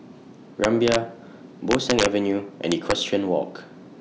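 From 0.64 to 0.96 s, the speech breaks into violent cracks, the mark of integer overflow. Peaks driven about 1 dB past the integer limit wrap to the opposite sign instead of being limited, so each one jumps across the full range. The same fault returns from 1.71 to 2.06 s, harsher at about 3 dB of overdrive, and again from 2.72 to 2.92 s at about 2 dB. The snaps are far sharper than ordinary clipping.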